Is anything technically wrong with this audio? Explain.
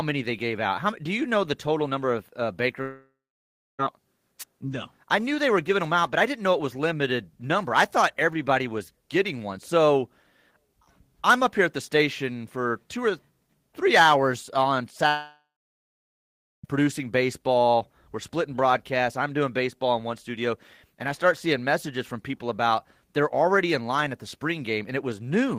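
Yes. The speech has two long network dropouts and one wireless microphone noise hit.

The long network dropouts run from 2.81 to 3.81 s, right after "total number of uh", and from 15.09 to 16.66 s, between "or three hours on" and "producing baseball". The likely cause is audio that never arrived over the network. Each time, the receiver stretches the last sound into a fading buzz, then goes quiet: about 0.64 s of silence in the first gap and about 1.17 s in the second. Roughly 1 s and 1.6 s of speech are simply gone. Speech resumes further on with nothing replayed, and that missing content is what separates this fault from an interference burst.

The wireless microphone noise hit comes at 4.39 s and lasts about 50 ms. An analogue FM radio link briefly faded as reflected signals cancelled, so receiver noise surged over the sound as a short swish of static. Unlike the dropouts, nothing is lost and no silence follows. 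The burst sits on top of continuous audio and clears almost at once.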